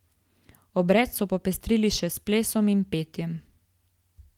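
Nothing here goes wrong at all; the Opus voice compression on this speech keeps its full bandwidth, reaching up to about 20.3 kHz, which fits a hybrid setting at around 24 kbps.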